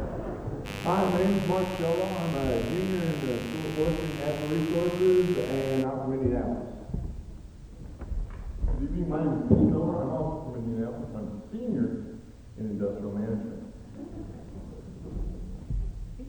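From 0.64 to 5.86 s a raspy mains buzz at 50 Hz sits fairly close below the sound. Unlike a smooth hum, its switching-spike harmonics reach several kHz.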